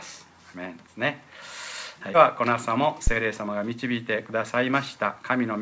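At 2.14 to 2.16 s a skip ahead occurs: around 0.4 s of audio is discarded while later audio was already queued, and playback jumps forward with no fill, so the material on either side is butted together almost directly.

At 3.07 to 3.14 s there is a phantom power thump. A supply switching on a live input pushes a voltage step through the coupling capacitors, heard as a deep low-frequency thud that dies away over about 14 ms.

Two jitter buffer speed-ups follow, at 3.42 to 4.16 s and 4.56 to 5.24 s. With more audio queued than its target, the receiver trims repeated pitch-period-length slices, running at 110% then 107% speed and removing roughly 70 ms and 50 ms. Pitch holds steady, but the sound feels hurried. The call path carries nothing above 8 kHz, which fits a G.722 codec.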